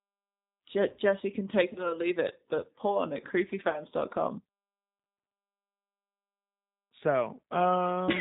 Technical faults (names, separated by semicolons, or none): G.729 codec; VoIP packet loss concealed by the speech codec